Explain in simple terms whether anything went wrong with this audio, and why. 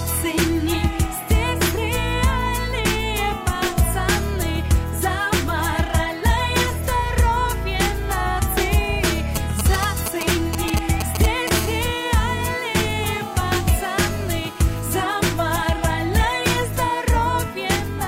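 Something did go wrong: a nearby 2G mobile phone got into the recording twice.

From 9.36 to 11.49 s there are GSM signalling bursts. The phone was sending short groups of radio pulses, the kind it sends while setting up a call or a message, and the audio circuit turned them into sound. The result is a galloping dit-dit-dit of brief buzzes at about 217 Hz. They are fairly loud, close to the level of the wanted sound.

From 11.54 to 14.89 s the pattern becomes a continuous GSM phone buzz. The phone was now transmitting steadily, as it does during a call, pulsing 217 times a second. The circuit picked up each pulse, so you hear a hard, raspy, constant buzz with many harmonics and no connection to the audio. It sits well below the wanted sound.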